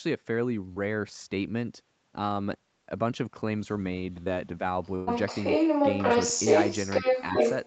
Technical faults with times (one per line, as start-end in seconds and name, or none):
0.73-0.78 short concealed packet loss
4.24-4.33 short concealed packet loss
4.83-7.67 other side's voice leaking through
4.95-5.09 burst of packet loss